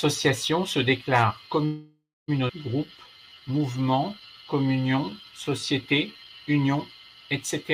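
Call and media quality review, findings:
Call audio freeze, 1.65–2.30 s, right after "se déclarent". Sound stalls, last sound stretched into fading buzz or hiss, then about 0.26 s silence. Likely jitter buffer underrun from delayed packets. Roughly 0.63 s inserted, nothing lost. Speech resumes where it stopped.

Skip ahead, 2.48 s, still near "se déclarent". Audio jumps forward almost seamlessly. Roughly 0.4 s of speech missing. Audio dropped in transit or by overflowing jitter buffer, pulling delay back down. Both sides spliced nearly directly.

Jitter buffer slow-down, 2.80–6.37 s. Speech runs at about 88% speed, pitch unchanged. Drawn-out sounds. Receiver repeating pitch periods to rebuild reserve. About 0.44 s added across the stretch.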